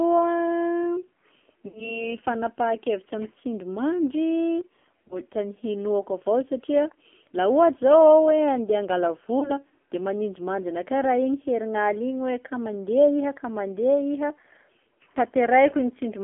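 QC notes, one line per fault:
Throughout: AMR narrowband mobile codec. Sound is confined to roughly 300 Hz to 3.4 kHz. Heavy damage gives buzzy, synthetic speech, which fits a low rate near 5.9 kbps.
1.68 to 2.04 s: lost AMR speech frames. The decoder repeats the last pitch and tract settings with falling gain, so speech smears and fades. This fits about 60 ms of lost frames.
5.08 to 5.19 s and 9.40 to 9.51 s: lost AMR speech frames. Each is a brief dip or warble from concealment, consistent with one lost 20 ms frame, before speech returns weak or rough for a moment.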